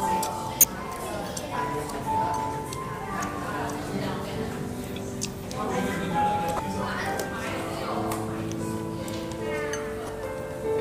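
Damaged data in a compressed stream causes brief glitches at 0.61–0.64, 6.56–6.59 and 10.07–10.09 s, as the decoder misreads corrupt frames and resyncs.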